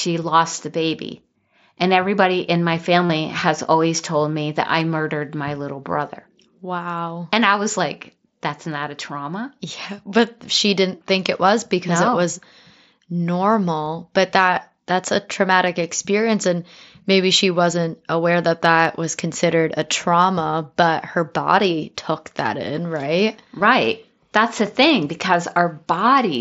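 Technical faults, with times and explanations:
3.06–3.10 s, 13.86 s and 23.59 s, concealed Bluetooth headset packet loss: a brief buzzy, held tone after "everybody in my" (about 37.5 ms), a barely noticeable 7.5 ms blip before "but that that's a", and a 15 ms one after "took that in right". Lost headset packets were filled by repeating recent waveform.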